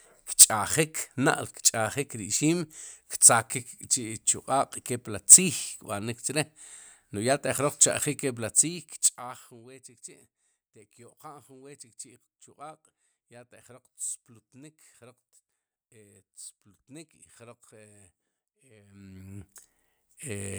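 A speech clip, and near the end, from about 18.88 to 19.48 s, there's zipper noise: a fast ticking that rides on the voice while the level moves. The gain is being moved in steps of 1 dB, roughly thirty a second, each one a tiny click, for a total change of around 20 dB in just over half a second. No smoothing between steps, which is why it zips instead of gliding.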